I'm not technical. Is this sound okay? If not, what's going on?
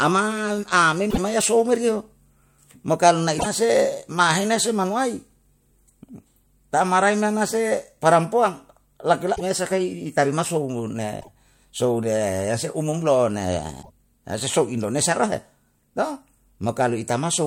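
No. Five brief glitches interrupt the speech: short chirps or blips at 1.07–1.18 s, 3.35–3.46 s (right after "mo karna"), 9.33–9.41 s, 11.17–11.29 s and 13.79–13.90 s, each about a tenth of a second. This is damaged data in a compressed stream. Parts of the compressed file were corrupted, so the player briefly misreads the audio and has to find its place again.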